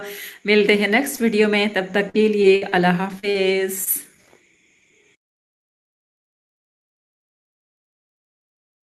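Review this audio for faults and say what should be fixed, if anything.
Short concealed packet loss occurs at 1.15–1.19 s, 3.19–3.25 s, 3.31–3.36 s and 3.84–3.88 s. Each time, 20 to 40 ms of audio failed to reach the decoder, and the receiver extended the preceding sound before blending back in, leaving a brief smear or wobble. On a spectrogram these spots show harmonics or noise stretched flat for a few hundredths of a second. Where the sound was voiced, the waveform repeats a short cycle before the real signal resumes. A larger jitter buffer or forward error correction would prevent this.

Repeated packet loss (robotic sound) runs from 2.09 to 2.73 s. Four separate holes, the longest 59 ms, total about 140 ms, so roughly a fifth of that stretch is patched rather than real. Because each patch is followed soon by another, the sound turns choppy. A spectrogram shows repeated frozen, smeared slices, and the waveform looks chopped. 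Fixing the network path or enabling redundancy and in-band FEC would stop this burst. The top of the spectrum stops near 12 kHz, which is the expected ceiling for this kind of call codec at its bitrate.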